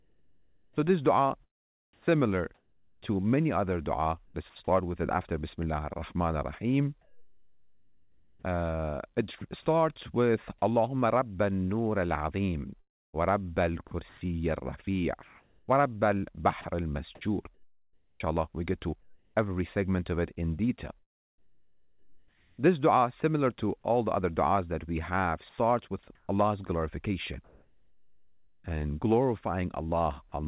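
From 0.0 to 4.3 s, the sound is chopped by the voice detector. It cuts in and out. About 1.5 s is replaced by flat synthetic noise. The background flickers between real and artificial. This is likely caused by the sender switching transmission on and off.

From 7.0 to 9.4 s, comfort noise takes the place of the background for about 1.4 s. The real background detail gives way to steady, featureless hiss. This is likely the receiver filling a pause while the sender sends nothing.

At 9.4 s, just before "starts with", sound is dropped by the voice detector. About 30 ms of sound is lost and filled with noise. The detector likely mistook that sound for background.

From 12.8 to 19.3 s, ending just before "every segment of it", the sound is chopped again. About 2.0 s is replaced in pieces. The likely cause is the detector repeatedly stopping and restarting transmission.

From 21.0 to 22.6 s, just after "of it in detail", comfort noise replaces the background again. 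It sits about 41 dB below the loud parts and is only about 1 dB off the real level. The likely cause is a silence gap in transmission.

From 25.5 to 28.6 s, about 1.4 s of background is again synthetic, likely for the same reason. Throughout, the narrowband call codec leaves nothing above 4 kHz.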